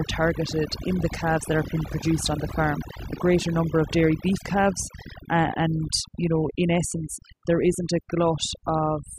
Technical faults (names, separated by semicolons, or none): overdone noise removal